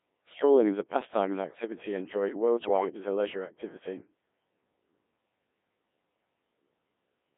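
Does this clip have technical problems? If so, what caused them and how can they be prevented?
Yes. Throughout, the speech passes through the Codec 2 vocoder, band-limited to 200 Hz to 3.5 kHz, with heavy damage whose sparseness fits roughly 1.3 kbit/s. Only pitch, voicing, level and envelope survive, and sine-wave resynthesis gives it a robotic buzz rather than the smeared, watery artefacts of a waveform codec. Preventing it means using a higher-rate waveform codec wherever the link allows.

From 2.61 to 2.90 s, bit errors on the digital voice radio link corrupt what sounds like about five vocoder frames, at an error rate of around 7 percent. Pitch, level and tone colour lurch into bleeps and warbling gibberish instead of the silence or repeated fragments that packet loss would leave. Staying within solid coverage, or adding stronger error protection, prevents it.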